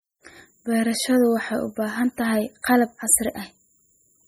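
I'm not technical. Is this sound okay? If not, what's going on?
No. The speech has a watery, swirling quality from start to finish, with the top end dulled and the s sounds turning into metallic chirps. The likely cause is heavy MP3 compression. To save space, the encoder throws away the treble above a fixed point and drops quieter parts of the sound. Those parts flicker in and out many times a second, which produces the swirl, and sharp consonant starts come out smeared.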